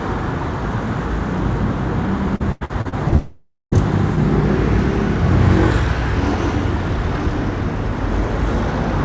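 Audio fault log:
2.36–3.15 s, repeated packet loss (robotic sound): six short holes, the longest about 91 ms, each patched by stretching the preceding sound, so roughly a third of this span is synthetic fill. The rapid alternation of real and repeated fragments gives a choppy, robotic texture with pieces missing.
3.16–3.75 s, long network dropout: the audio stops arriving, and the last sound is carried on as a fading buzz or hiss before about 250 ms of silence. Around 0.56 s of material never plays, and playback resumes after it, likely an extended network outage rather than scattered losses.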